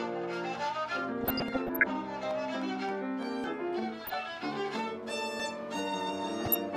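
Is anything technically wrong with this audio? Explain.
Yes. Three kinds of fault are audible.

DAB burbling, 1.21 to 1.84 s, 3.99 to 4.14 s and 6.45 to 6.57 s: bit errors, around 0.4 to 0.7 percent, slip past error correction and corrupt sub-band data, producing short blips of noise and sub-bands jumping in level.

Audio missing between chunks, at 1.48, 3.44 and 5.40 s: a gap of roughly 40 ms, likely lost at 2-second chunk boundaries, leaves abrupt skips where the two sides butt together.

Train of clicks, 2.23 to 3.24 s: likely interference injects about five pulses at an uneven pace, around 4 per second, heard as popping roughly 10 dB above the sound.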